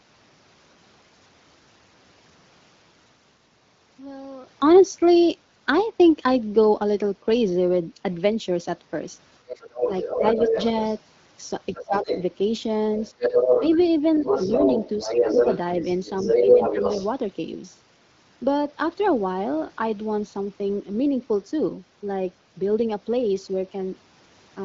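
From 9.49 to 10.98 s the other side's voice leaks through, a second talker sitting a little below the main speech. That's likely loudspeaker playback getting back into the mic because the echo canceller didn't fully remove it. Inside that stretch, between 9.85 and 10.56 s, the main speech gets suppressed in double talk. It dips by around 10 dB in short bits adding up to roughly a fifth of a second, likely because the canceller couldn't separate the near talker from the echo while both were active, so it turned everything down.

The same thing happens again from 11.74 to 12.22 s. The leak is back at a similar level, and from 11.79 to 12.11 s the main speech ducks harder, something like 15 dB, for about a fifth of a second in total.

After that the leakage gets stronger. From 13.0 to 13.92 s and then from 14.24 to 17.1 s the far-end voice comes through about as loud as the main speech. Near the end of that long stretch, 16.38 to 17.03 s, the main speech gets a milder double-talk dip, maybe 5 dB, spread over roughly 150 ms.

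Underneath all this, the AMR-WB (HD Voice) codec at 15.85 kbit/s comes through cleanly, with the top end stopping around 7.5 kHz.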